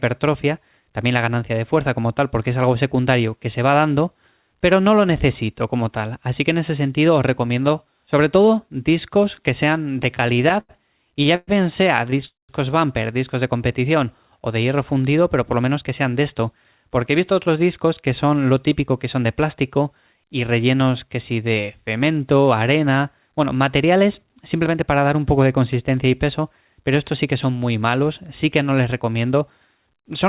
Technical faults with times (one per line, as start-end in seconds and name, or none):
9.94-11.49 repeated stalls (stutter)
12.07-12.23 repeated stalls (stutter)
12.25-12.51 call audio freeze
15.54-17.79 jitter buffer speed-up